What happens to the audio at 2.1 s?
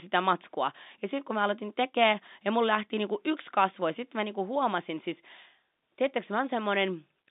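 Nothing goes wrong at 2.1 s: the speech carries on intact through that moment, heard through the narrow telephone band of the G.711 line.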